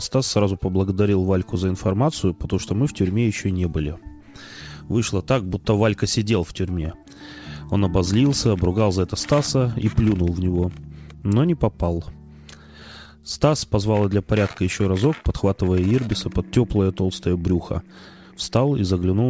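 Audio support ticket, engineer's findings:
Clock drift between sender and receiver, whole clip: sender clock running about 4% slow, jitter buffer repeatedly draining toward empty; receiver pads with repeated short pieces to keep playout fed.

Repeated timing corrections, 0.08 to 19.29 s: uneven small hiccups, tempo dragging to about 96% speed. Jitter buffer repeating fragments adds roughly 0.7 s overall. Audible band stops at 8 kHz, consistent with G.722 call codec.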